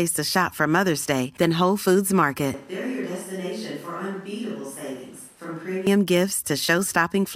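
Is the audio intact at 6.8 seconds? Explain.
Yes, the speech at 6.8 seconds is intact, with no fault at that moment.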